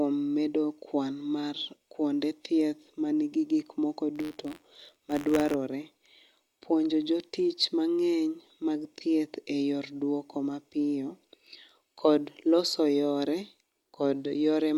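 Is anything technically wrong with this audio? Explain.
Yes. There is buffer tearing from 4.15 to 5.55 s. The program filling the playback ring buffer and the hardware reading it have slipped out of step. They cross inside every period. A small slice of each buffer replays speech from one lap earlier, roughly 50 ms old, with hard joins on both sides. This repeats at about 86 Hz, which fits a 512-sample buffer. It sounds like a steady robotic buzz riding on the voice.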